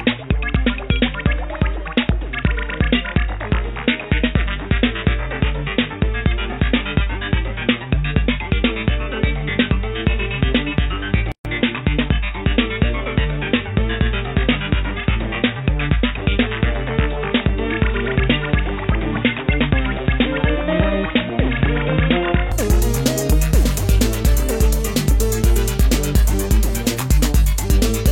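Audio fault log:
0 to 22.52 s, input switched to a poorer device: nothing above 3.8 kHz, level about 5 dB lower, and new noise roughly 35 dB down, then full band returns without silence. The likely cause is a device change, not a mere filter.
11.32 to 11.45 s, gap at a join of encoded pieces: a 132 ms gap with codec-softened edges, then the sound resumes where it stopped, so nothing is lost, unlike a dropout.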